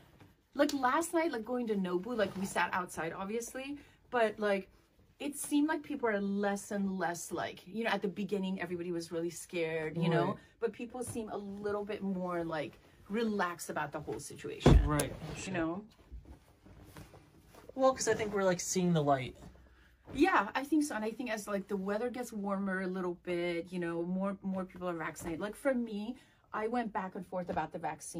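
Compressed frames skipped at 14.26, 15.47 and 25.82 s: roughly 50 ms of audio goes missing each time, so the audio jumps ahead at each point.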